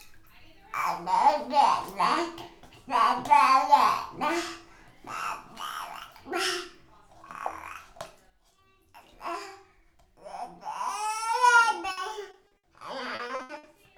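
From 11.91 to 12.65 s the sound breaks up with repeated packet loss (robotic sound): a run of short holes, the longest about 60 ms, each patched by stretching the last bit of audio, so roughly a quarter of that stretch is filler. It returns from 13.15 to 13.65 s more heavily, with holes up to 80 ms and nearly half the span concealed. Unlike a single dropout, the rapid, repeated patching gives a choppy sound with pieces missing.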